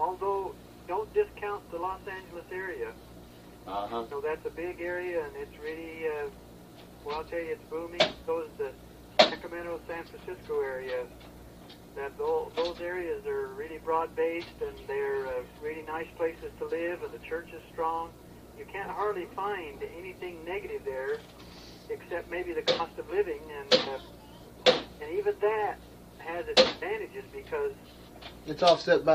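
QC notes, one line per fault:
No technical faults were heard anywhere in the clip; the signal holds steady from beginning to end with nothing that needs flagging.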